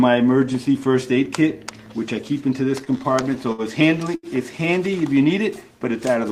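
Between 2.79 and 3.62 s the audio drags and stutters: the sound keeps catching and holding in small hitches, with the longest hold fading slightly before the flow picks up again. This is repeated stalls (stutter). Packets were reaching the receiver late or more slowly than they were played out, so its jitter buffer ran dry nine times in that stretch. Each time, the receiver carried the last sound forward until data arrived, filling about 151 ms in total, roughly a fifth of the span, with the longest gap at 63 ms. Nothing is lost, but the timing is uneven. A single, briefer hitch follows between 4.15 and 4.26 s, where one sound is held about 81 ms too long with a faint buzzy or slightly dipped quality. That is a short stall from a late packet. One packet arrived about 81 ms behind schedule, the buffer emptied, and the receiver stretched the preceding sound until it came, then resumed from the same point.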